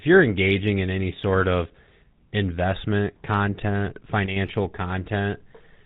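Throughout, the speech carries plainly audible GSM full-rate codec damage, consistent with 13 kbps coding: nothing above 4 kHz and a buzzy, gravelly roughness from pulse-driven excitation. From 4.26 to 4.37 s, just after "investment content", the level drops abruptly by about 6 dB for roughly 0.1 s, likely one channel dropping out before the mono sum.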